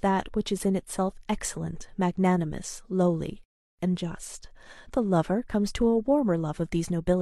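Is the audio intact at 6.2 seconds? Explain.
Yes, the audio is intact at 6.2 seconds, with no audible fault at that moment.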